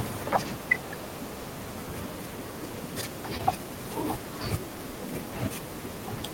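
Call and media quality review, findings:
Short concealed packet loss at 3.37–3.41 s: brief smear or wobble. Probable component is the receive-side jitter buffer and decoder concealment. About 20 ms of audio never arrived in time. The decoder covered the gap by extending the preceding sound for roughly 15 ms, then crossfaded back into real audio. Any short consonant there may be gone.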